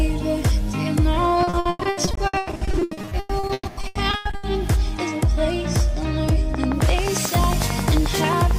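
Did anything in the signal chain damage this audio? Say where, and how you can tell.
Yes. From 1.43 to 4.45 s there's repeated packet loss on the network side: dozens of holes, the longest 120 ms, patched by stretching earlier sound, so it turns choppy and robotic.

Then a train of clicks runs from 6.55 s to the end: regular ticks at 11.2 per second, poking well above the sound, likely interference getting into the analogue wiring or interface.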